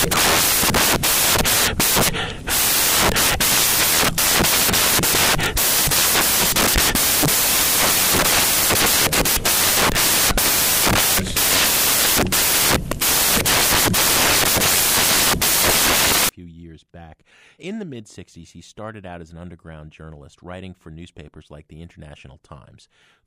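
Samples built from the wrong bytes run from 0.0 to 16.29 s in this speech clip, until "years back": misassembled bytes promote noisy low bits, producing loud, harsh broadband noise.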